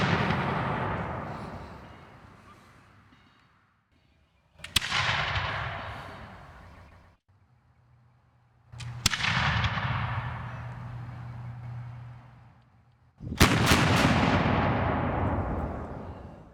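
From 11.63 s to 15.33 s the audio carries a doubled audio track: a second, full-band copy of the same sound trails the original by roughly 300 ms, sitting about 5 dB below it. The copy has no decay tail or room colouring, so it reads as a flat, slapback-style repeat rather than an echo, and it switches in and out abruptly at those times. The likely cause is a second, slower capture path or an edit holding two misaligned copies.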